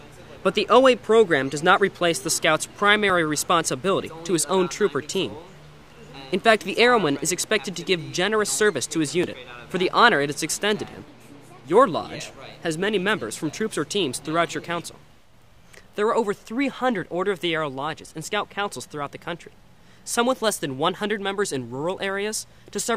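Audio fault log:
3.10 s and 9.24 s, dropped buffer (overrun): The likely cause is that the recording software fell behind and the hardware overwrote a block of samples before it was read, so a few milliseconds of audio were lost each time and the audio on either side was butted together with no gap. At each point the waveform jumps discontinuously and the sound skips slightly ahead, with no silence between.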